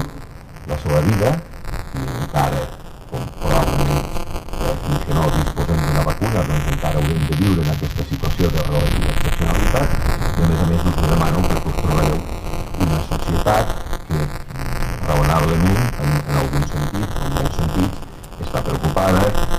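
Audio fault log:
throughout: buffer tearing. A steady robotic buzz near 172 Hz rides on the sound and drops away whenever the signal goes quiet. The rate points to a buffer of about 256 samples. The writing side and the reading side have drifted so they cross inside every period, which leaves a small slice of each buffer, roughly 7 percent, holding audio from about 10 ms earlier, with a hard join at each edge. Unlike dropouts or crackle from underruns, it never goes silent and never comes in bursts. The fault stays locked to one rate.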